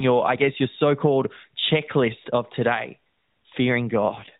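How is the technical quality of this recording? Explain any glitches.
The recording is narrowband mobile-phone speech, with nothing above 4 kHz and light AMR-NB roughness, and near the end it has one glitch.

AMR rate drop, 4.04 to 4.36 s: the codec switches to fewer bits per 20 ms frame, which fits a fall from 12.2 to 5.9 kbps. The band and continuity stay intact, but the voice turns buzzier and more synthetic for that stretch.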